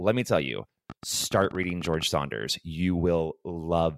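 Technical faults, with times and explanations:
0.90–2.04 s, train of clicks: just after "me tell you", about twenty sharp clicks of much the same shape tick over the speech at 15.1 per second, unevenly spaced and peaking around 5 dB above the speech. The likely cause is interference or a faulty connection injecting repeated brief pulses.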